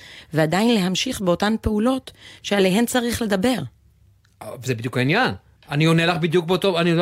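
A listener hears no technical fault anywhere in this speech recording.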